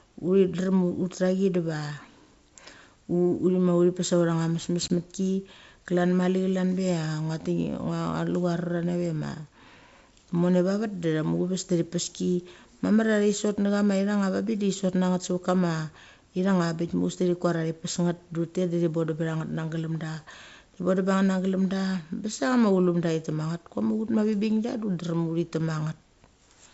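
At 4.88 s the speech drops into a hard-edged gap of about 20 ms. This is packet loss on an ADPCM call, and it fits a single lost packet. The hole is filled with silence. The decoder's predictor and step size then no longer match the sender's. When the speech returns, it comes back slightly distorted. By 4.94 s the two sides agree again and the G.722 wideband sound resumes.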